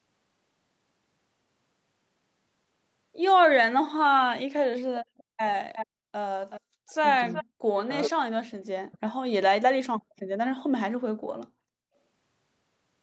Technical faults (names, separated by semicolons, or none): echo leak; speech suppressed in double talk